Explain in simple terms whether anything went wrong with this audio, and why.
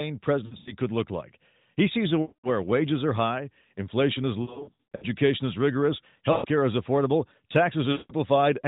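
Yes. The speech briefly warbles, smears and fades out at 0.46–0.74, 2.22–2.49, 4.42–5.05, 6.32–6.46 and 7.92–8.13 s, right after "sees a" at the second spot. These are lost AMR speech frames. Radio errors corrupted bits of the phone signal, so the decoder stretched out the last good sound while fading it.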